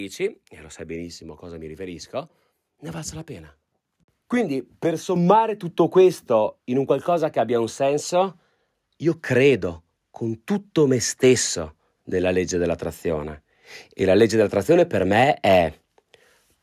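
At 5.16 s the microphone volume is stepped up: the call software judged the input too quiet and raised the device's capture level in a single jump of about 7 dB. Speech and room background become louder at the same instant. That shared, instantaneous jump is what separates it from a talker leaning closer, which lifts the voice but not the background, and from automatic gain control, which rides the level gradually.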